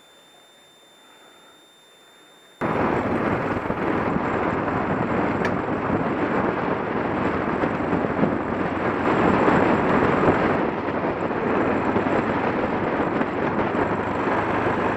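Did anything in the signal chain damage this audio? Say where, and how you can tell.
Yes. The damage is in the analogue stage, on the power side. A switching supply whistle sits from 0.00 to 2.77 s. It is a thin high tone near 3.5 to 3.6 kHz. It sits roughly 35 dB below the programme. The pitch wanders slightly within that band rather than holding steady. That drift is the clue. A switching regulator is cycling at an audible rate, and its ripple is leaking into the audio path.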